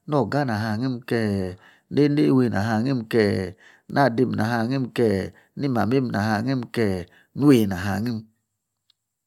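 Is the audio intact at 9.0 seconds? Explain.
Yes, the speech at 9.0 seconds plays through intact, with no dropout, click, distortion or other fault at that point.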